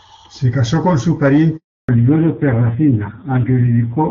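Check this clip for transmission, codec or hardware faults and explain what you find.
Two faults are present: a handover gap, then a fallback to narrowband that lasts to the end of the clip.

From 1.57 s to 1.89 s there is a handover gap. The speech dies away within a few tens of milliseconds and stays silent for 320 ms. This fits the call switching networks with no speech frames delivered until the new link came up, so that stretch of speech is lost.

From 1.89 s onward there is a fallback to narrowband. Before the gap the audio has the full, clear wideband quality of HD Voice, consistent with a high AMR-WB rate such as 23.85 kbit/s. After the gap nothing remains above 4 kHz, and the speech sounds duller and rougher. This points to a low-rate narrowband AMR mode, around 5.9 kbit/s.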